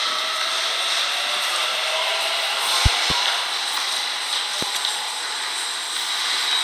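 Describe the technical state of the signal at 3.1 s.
At 3.1 s the signal carries a loud pop, part of a disturbance from 2.86 to 3.13 s. Two sharp thumps stand out, roughly 20 dB above the sound, which continues underneath. A sudden voltage step, likely from a plug, switch or static, caused them.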